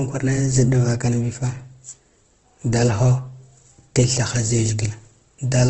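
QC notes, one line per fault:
Throughout, Opus compression: grainy, rough speech with nothing above 8.2 kHz, likely from low-rate CELT coding, near 16 kbps, filling starved bands with noise.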